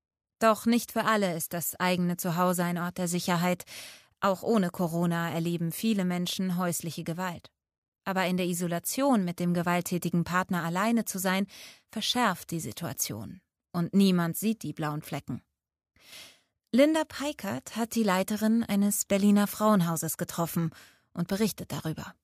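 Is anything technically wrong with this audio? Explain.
No, nothing technically wrong can be heard in this speech recording. There is no fault to point to at any moment in it.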